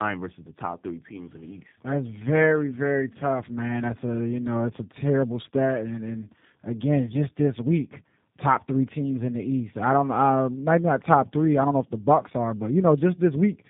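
Throughout, the speech shows tandem speech coding: it was decoded and re-encoded at link borders, and two low-rate speech codecs in a row, consistent with AMR-NB then G.729A, each worked on degraded input. The result sounds rough, muffled and warbly, with nothing above 3.8 kHz.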